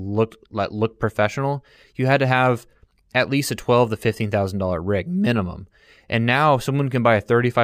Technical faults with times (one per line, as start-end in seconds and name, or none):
0.00-7.64 imaging from linear upsampling